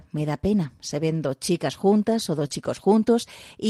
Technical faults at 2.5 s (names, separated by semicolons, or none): short concealed packet loss; lost packet rebuilt from error correction